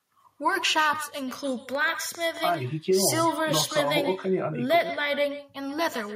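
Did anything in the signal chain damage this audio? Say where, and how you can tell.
Yes. Echo with no canceller runs throughout. A thin copy trails the speech about 150 ms later, around 13 dB down, and call processing never removed it.

A train of clicks hits from 1.31 to 2.55 s: about seven uneven ticks, roughly 4.9 per second, peaking a little above the speech. That's likely interference or a glitching interface.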